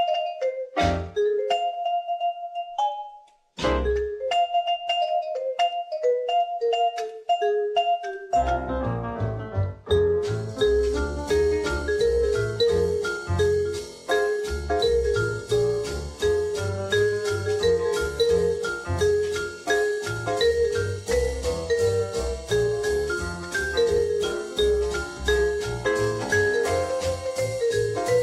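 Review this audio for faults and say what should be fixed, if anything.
Nothing here needs fixing; no faults were found.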